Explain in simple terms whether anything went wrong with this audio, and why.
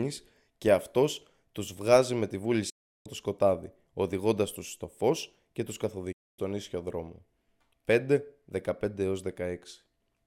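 Yes. The speech suffers a digital broadcast dropout twice, from 2.70 to 3.06 s and from 6.12 to 6.39 s. The receiver lost good data and muted, so the sound fades out almost instantly, leaves a clean silence, then resumes further along. Unlike crackle or stutter, nothing repeats, and the missing speech never comes back.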